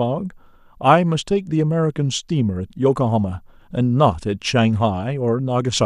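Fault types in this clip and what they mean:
No technical fault can be heard anywhere in the speech signal, which runs continuously with no interruptions, level jumps or added disturbances.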